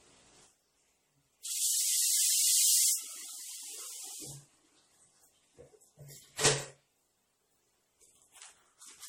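From start to finish the audio carries what sounds like generation loss. It has that swirly, hollow, smeared quality, and transients come out soft, with nothing above 17 kHz. It's well beyond what a single pass of roughly 64 kbit/s MP3 would do on its own. The likely cause is the audio being decoded and re-encoded around seven times, each pass re-quantising on a shifted frame grid so the noise and spectral gaps keep piling up.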